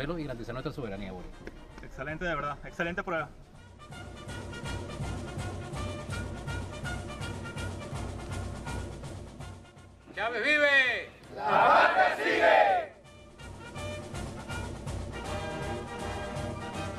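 No technical fault can be heard at any point in this clip. There is nothing in the audio to single out or explain.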